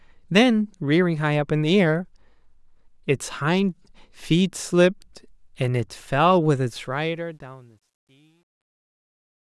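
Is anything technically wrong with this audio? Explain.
Yes. From 6.70 s to 9.60 s, the fade-out at the end of this speech clip shows truncation distortion. The fade stage keeps too few bits with no dither, which fits about 11-bit resolution, so low-level waveforms collapse into coarse steps. It sounds gritty, worst from 7.6 s to the end.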